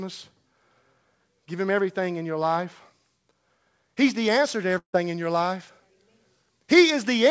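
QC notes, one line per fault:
4.25–7.3 s, pre-emphasis left on: From 4.25 s to the end the sound turns thin, bright and hissy, with sibilants spitting. The treble was lifted and the matching de-emphasis never applied, with a boost that reaches about 8 dB at 10 kHz relative to 1 kHz, which fits the CD 50/15 µs curve. The call path's G.722 coding stops everything above 8 kHz, so the boost shows up as harsh upper-mid and top-end edge.
4.78–4.95 s, long network dropout: At 4.78 s the sound smears into a fading buzzy continuation of what came just before, then sinks to near-silence before normal audio returns at 4.95 s. About 160 ms of material is simply gone, so the audio picks up further along rather than where it stopped. This is likely a burst of lost packets, with the receiver stretching the last good sound to cover the hole until it gives up.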